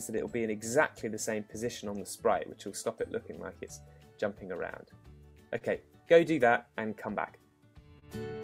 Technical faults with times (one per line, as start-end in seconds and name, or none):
0.00-8.44 clock drift between sender and receiver
0.29-4.71 repeated timing corrections
5.58-5.64 short stall from a late packet
7.99-8.05 short stall from a late packet